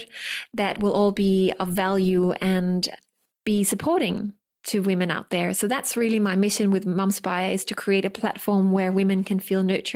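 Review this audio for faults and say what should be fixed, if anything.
Nothing here needs fixing: the speech keeps its full bandwidth through Opus voice compression in hybrid mode, with only the light coding character you'd expect at a moderate rate, one that fits roughly 24 kbps.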